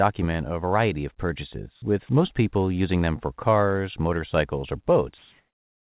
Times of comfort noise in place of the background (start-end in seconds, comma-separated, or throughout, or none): 5.18-5.82